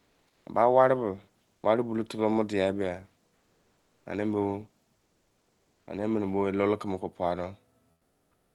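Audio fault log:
0.00–0.45 s, 3.37–4.05 s, 4.97–5.87 s and 7.91–8.55 s, comfort noise in place of the background: the sender likely stopped transmitting during pauses (Opus DTX), so the receiver filled them with steady, featureless synthetic noise about 2 to 7 dB quieter than the real background.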